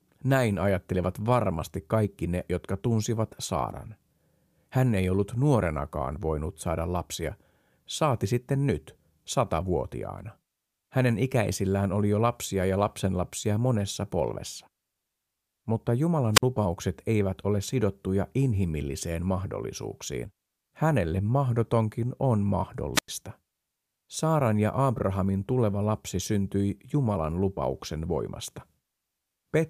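A brief burst of hiss, then a hole of near silence about 52 ms long at 16.33 s, just before "lupaukset eivät ole sidottuja", and again at 22.94 s, after "mahdotonkin on", lasting about 97 ms. This is wireless microphone squelch dropout: the FM radio link weakened until the receiver's squelch muted the output.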